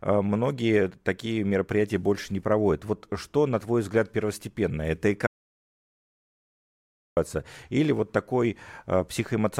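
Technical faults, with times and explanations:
5.27–7.17 s, audio dropout to silence: the speech cuts off abruptly and returns just as suddenly after about 1.9 s of dead digital silence with no room tone underneath. The input was likely lost while the recorder kept writing zeros, so that stretch of speech is gone.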